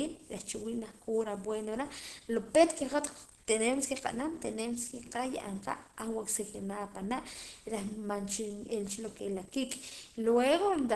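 From start to finish there's Opus compression damage: the speech sounds muffled and hoarse, with nothing above 12.1 kHz, likely from hybrid mode at around 16 kbps.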